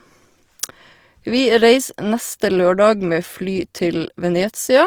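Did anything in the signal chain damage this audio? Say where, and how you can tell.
Yes, at the codec stage: Opus compression, likely in CELT mode near 24 kbps, fills starved bands with noise, so the speech sounds grainy and rough throughout.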